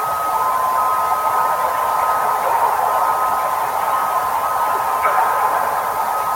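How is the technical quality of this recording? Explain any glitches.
The recording holds steady throughout, with no dropouts, distortion or other glitches to point to in the signal.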